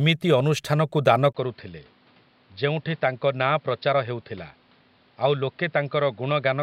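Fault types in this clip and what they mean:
Input switched to a poorer device: At 1.33 s a 20 ms gap breaks the speech, which then turns dull and boxy. Nothing reaches above 5.4 kHz. The level drops about 5 dB, and new background noise appears. A change to a narrower-band microphone is the likely cause.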